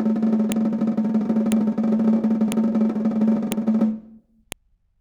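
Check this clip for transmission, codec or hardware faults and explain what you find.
There is one fault, repeated: a file header played as audio. Sharp clicks land at 0.52, 1.52, 2.52, 3.52 and 4.52 s, one each second. The music arrives in 1-second pieces. Each piece keeps its WAV header. Those bytes play as a brief, loud snap over the music.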